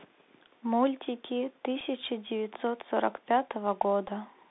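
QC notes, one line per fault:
Throughout: Bluetooth CVSD headset codec. The speech is confined to roughly 250 Hz to 3.7 kHz, with granular hiss beneath it and scratchy s sounds, plainly audible. One-bit delta coding, which fits 64 kbps, has an adaptive step that cannot keep up with loud high-frequency energy.
1.8 s and 4.08–4.10 s: Bluetooth headset packet repeated. Each gap is 7.5 ms, which fits two lost 3.75 ms headset packets. The chip decoded the previous packet's bits again, so each gap is a brief stretch of audio repeated every 3.75 ms.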